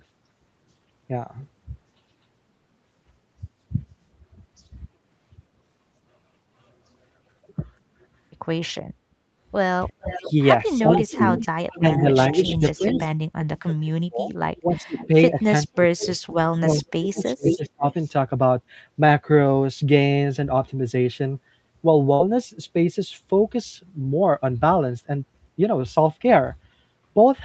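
Speech recorded over a call, with its top end stopping near 8 kHz, which fits a wideband Opus stream at about 32 kbps. Background gated by the echo canceller at 9.09 to 9.26 s: the room sound drops by about 26 dB for roughly 150 ms while the canceller clamps the microphone, then returns. Echo leak at 9.89 to 10.32 s, 10.92 to 13.11 s, 14.57 to 16.19 s and 16.75 to 18.09 s: a delayed copy of the speech comes back 416 ms late in the first two stretches and 500 ms late in the last two. Its level runs from about 20 dB below the speech to only about 5 dB below. The likely cause is a far-end loudspeaker echo that the canceller failed to remove fully. Speech suppressed in double talk at 9.98 to 10.05 s and 10.83 to 17.86 s: the talker's speech dips by about 30 dB in the brief first spot, then by up to about 40 dB across roughly four seconds of the longer span, likely because the canceller could not separate the talker from the echo and turned both down. 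Burst of packet loss at 22.13 to 22.21 s: about 59 ms of concealment stretches and fades the last sound, then playback resumes with about 60 ms of audio missing.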